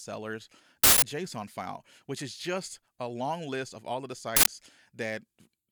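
Two uninitialised buffer bursts hit this speech: 0.84 to 1.02 s, just before "file which is just", then 4.37 to 4.46 s, right after "of all of the". Stale memory got played as samples, giving loud digital noise blasts of about 186 ms and 93 ms, which fits 8192- and 4096-sample blocks.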